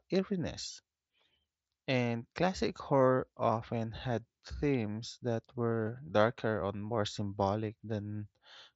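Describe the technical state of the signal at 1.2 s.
At 1.2 s the speech is intact, with nothing wrong beyond the band limit of the Bluetooth mSBC headset codec it passes through.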